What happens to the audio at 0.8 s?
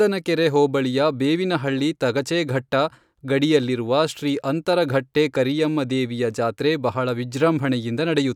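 Nothing goes wrong at 0.8 s; the speech is intact there, with no dropout, click or distortion.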